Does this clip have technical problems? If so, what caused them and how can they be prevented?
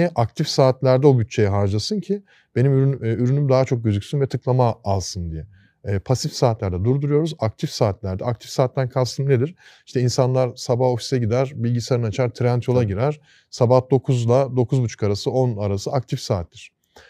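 No, this clip has no technical problems, so there is no cause to identify and nothing that needs preventing.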